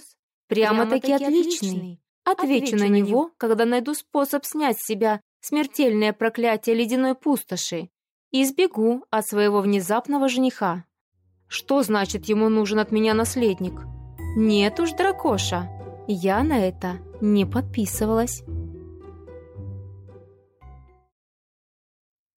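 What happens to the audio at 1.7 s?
At 1.7 s the sound is doubled. A doubled audio track is already present when the clip begins and runs until 3.2 s. A second full-band copy trails the original by roughly a tenth of a second. It sits about 5 dB lower. The copy has no decay or room colour, so it reads as a hard, flat repeat. It likely comes from the same signal being captured a second time through a slower path. At 3.2 s the copy drops out abruptly.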